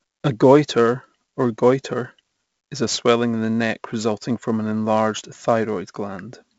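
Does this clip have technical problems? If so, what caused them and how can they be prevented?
Yes. Throughout the speech there is 4-bit ADPCM compression damage: a gritty hiss riding on every loud syllable, rough distortion on sharp onsets where the adaptive step lags, and nothing above 7.7 kHz, which fits a 64 kbps stream. Unlike perceptual-codec swirl, the noise is broadband and tracks loudness. Keeping the speech in PCM or a modern perceptual codec at an adequate rate avoids this.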